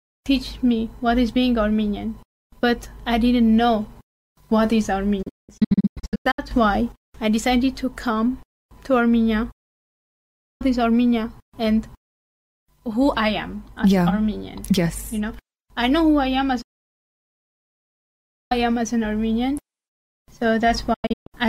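The sound drops to silence four times, each cut fading out within about 8 ms and returning later. From 5.22 to 6.39 s it breaks into short holes, the longest 192 ms. From 9.51 to 10.62 s and from 16.62 to 18.52 s come solid gaps. From 20.94 to 21.27 s are brief holes again. This is digital broadcast dropout: the receiver muted whenever frames arrived corrupt or missing, so everything sent then is gone. The hole lengths fit frames of about 32 ms.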